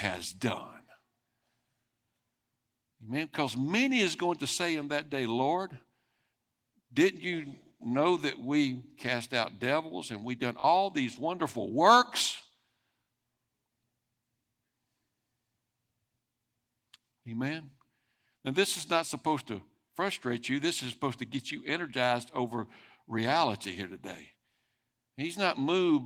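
Repeated buffer at 10.6 s, between "devils and we've done" and "these wonderful works": audio arrived late, so a piece consistent with a 20 ms buffer played three times, a quick stutter. It recurs at 13.04 s, played twice.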